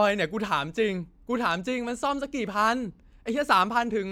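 Nothing technical goes wrong anywhere in this bit of speech, so there's no fault to point to.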